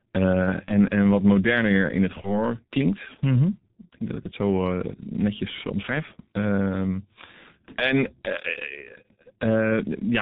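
Throughout, the speech carries heavy G.723.1 codec damage, muffled and hoarse with smeared consonants, consistent with a roughly 6.3 kbit/s coder; a spectrogram shows nothing above 4 kHz. At 0.66 to 0.71 s and again at 2.21 to 2.41 s, VoIP packet loss concealed by the speech codec stretches the sound into a fading buzzy tone or coloured noise, consistent with one lost 30 ms frame each time. The waveform shows a smoothly decaying, repetitive stretch.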